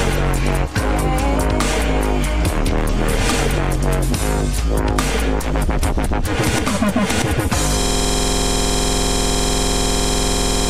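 At 7.82 s the system hangs while the sound hardware keeps replaying its ring buffer, a system hang loop that fits a 2048-sample buffer. A 46.44 ms slice repeats about 60 times at 21.5 Hz until the end, heard as a rapid machine-gun stutter.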